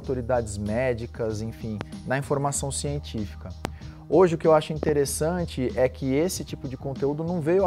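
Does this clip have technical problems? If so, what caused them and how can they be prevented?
Yes. There are four loud pops. The first, at 1.81–1.83 s, stands roughly 15 dB above the sound. The second, at 3.65–3.67 s, is the strongest at around 20 dB. At 4.83–4.91 s a double pop of about 15 dB follows. Each pop is a sharp transient sitting on top of audio that carries on beneath it. The likely cause is a sudden voltage step or pulse from a plug, switch, static discharge or driver glitch. Downstream circuitry shapes that pulse into a brief thump. To prevent this, secure connectors, avoid switching or touching cables during recording, and control static.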